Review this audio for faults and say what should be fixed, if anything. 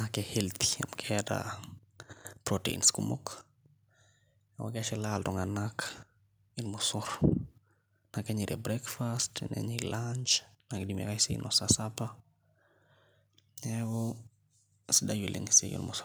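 Nothing here needs fixing; I didn't catch any faults anywhere in the recording.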